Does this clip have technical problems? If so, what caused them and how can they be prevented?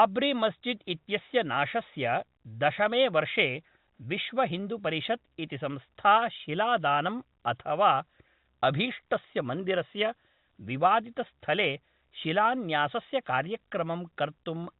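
No, the recording shows no technical problems that need fixing or preventing. It carries the narrow band of ordinary G.711 telephone coding, with nothing above 4 kHz.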